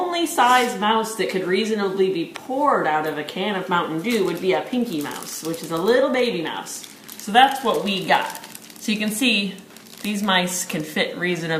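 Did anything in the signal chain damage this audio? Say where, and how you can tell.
Yes. Between 6.79 and 7.79 s the sound abruptly slows by about 5.2% and drops in pitch by about 93 cents, nearly a semitone. After that second, speed and pitch snap back together. Because both shift as one, this is a playback-rate change, not a filter or codec effect. The likely cause is a drift correction step at the driver or buffer stage, where clock-matching software resampled in one jump to refill its buffer.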